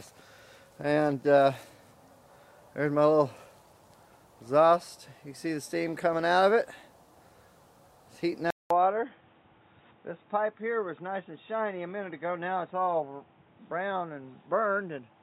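Around 8.5 s there's a 200 ms gap, and from there to the end everything above 3.8 kHz is gone, the level drops by about 5 dB, and a new noise floor appears around 35 dB down. That points to the input likely having switched to a poorer device, so the back half sounds dull and boxy.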